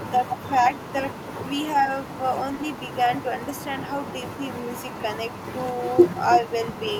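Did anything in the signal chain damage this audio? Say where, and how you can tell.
Yes, in call processing. From 0.18 to 0.51 s and from 6.41 to 6.51 s, the speech dips by about 10 dB in short patches but never goes silent. This is likely speech suppressed in double talk: the echo canceller attenuated the near talker while sound came from the far end. Packet loss would leave hard gaps instead.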